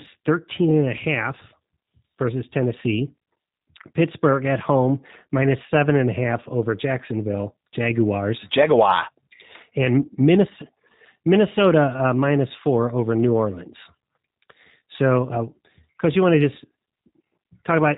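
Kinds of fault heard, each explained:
G.729 codec: the speech went through a narrowband 8 kbit/s VoIP coder that rebuilds each 10 ms frame from a vocal tract filter, a pitch predictor and a few pulses. Nothing above 4 kHz survives, so the voice sounds muffled, with a plainly audible rough, synthetic buzz throughout.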